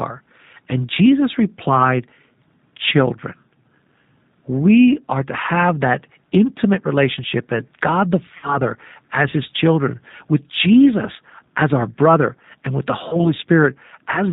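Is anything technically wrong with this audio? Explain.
Yes, two things. The whole clip runs through the G.729 codec at 8 kbit/s, and the damage is plainly audible. This codec doesn't send the waveform. It sends a vocal tract filter, a pitch predictor and a handful of pulses every 10 ms, and the decoder rebuilds speech from those. So nothing above 4 kHz survives, and the voice comes across intelligible but a bit rough and synthetic, with that telltale dull, boxy top end.

On top of that there's VoIP packet loss concealed by the speech codec, twice. The first runs from about 8.37 to 8.58 s, right before "as his children with". About 60 ms went missing, which fits two lost packets. The second is from about 13.09 to 13.32 s, just after "brother and with the", with about 30 ms lost, so likely one packet. The decoder filled each gap by repeating its last pitch and filter at falling gain, so you hear the sound stretched into a buzzy tone or a coloured noise that fades. 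Because each frame builds on the previous one, the voice stays weak and smeared for a while after the packets return, which is why each glitch lasts well beyond the missing audio itself.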